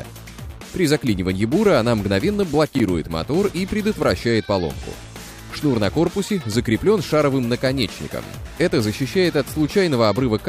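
A short audio clip with one chunks-out-of-order fault between 2.75 and 2.80 s. A block about 11.6 ms long plays three blocks after its proper place, so that stretch is briefly jumbled, with three hard joins. Unlike a dropout or packet loss, there is no gap or muted hole, and unlike a stutter, nothing repeats. All the audio is there, just in the wrong order.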